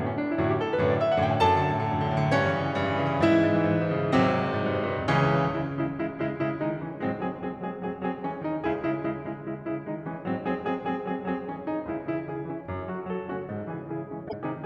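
Damaged data in the compressed stream appears from 14.25 to 14.34 s, near the very end of the music. For about 84 ms the decoder is handed bytes that no longer form valid frames, so it either misreads them into garbage or discards them, loses its place in the stream and hunts for the next usable frame header. What reaches the ear is a brief chirp, squawk, click or short hole that breaks into the music before normal decoding resumes.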